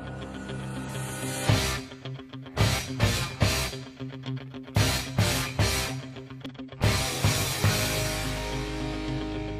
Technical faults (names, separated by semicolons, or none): damaged data in a compressed stream